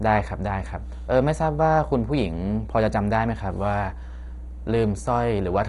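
From start to finish a mains hum sits under the speech: a steady 60 Hz tone with some low harmonics, fairly loud at roughly 10 dB below the speech, likely from a ground loop or nearby transformer. A spectrogram shows a bright unbroken line at 60 Hz, and the waveform a constant low ripple.

Also present throughout is heavy damage from what is likely MP2 compression at a low bitrate, with too few bits forcing upper sub-bands off. The speech sounds dull and gurgling with granular distortion. A spectrogram shows nothing above 11.2 kHz and flickering, blocky bands below.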